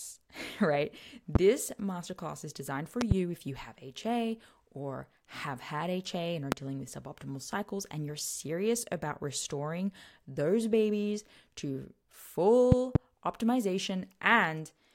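At 1.35 to 1.38 s, just before "masterclass is designed for", a single loud pop jumps well above the speech. A double pop follows at 3.01 to 3.14 s, between "masterclass is designed for" and "if you have". Another single one comes at 6.52 to 6.55 s, after "and are", and a final pair at 12.72 to 12.98 s. These are likely voltage pulses from a plug, switch or static discharge, shaped into a thump. Unlike a dropout, the speech continues unbroken beneath each one.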